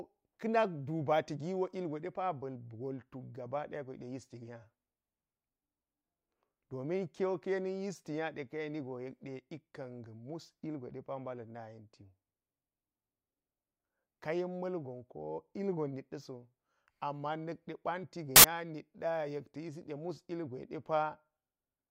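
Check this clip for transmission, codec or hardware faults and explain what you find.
One fault is present. From 18.36 to 18.44 s, samples built from the wrong bytes: misassembled sample bytes push low-order bits into the high-order positions, producing a burst of loud, harsh broadband noise over the speech.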